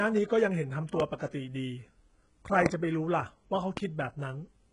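Throughout the speech, the treble stops at 11 kHz, and the upper band has the gritty, metallic quality of heavy HE-AAC compression, which is the likely cause. The codec carries only the lower spectrum and synthesizes the top by spectral band replication, copying lower bands upward under a coarse envelope. The rebuilt harmonics don't align with the real ones across the crossover, so sibilants sound smeared and lispy. The damage fits a very low bitrate of around 12 kbps.

Three loud pops sit on top of the speech, which continues beneath each one: 1.00 to 1.03 s, 2.66 to 2.69 s and 3.77 to 3.80 s. Each is a single sharp burst of about 30 ms. The second is the strongest, roughly 25 dB above the speech, the first about 20 dB and the last about 15 dB. A sudden voltage step or pulse, as from a plug, switch, static discharge or driver glitch, is the likely cause, shaped in the downstream circuitry.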